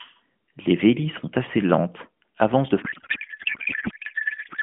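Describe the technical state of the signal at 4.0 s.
At 4.0 s the speech has turned into a codec payload misread, which runs from 2.82 s to the end of the clip. The AMR frames were packed octet-aligned but are being unpacked as bandwidth-efficient, so every field lands in the wrong bits. The decoder still gets frames that look valid and turns them into garbled noise and warble that barely tracks the talker. The narrowband line underneath still limits everything to the usual mobile band, roughly 150 Hz to 3.5 kHz.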